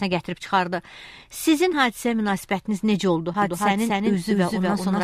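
A doubled audio track begins abruptly at 3.42 s and runs to the end. A second, full-band copy about as loud as the original trails it by roughly a fifth of a second, with no decay or room colour, likely from a slower second capture path mixed back in.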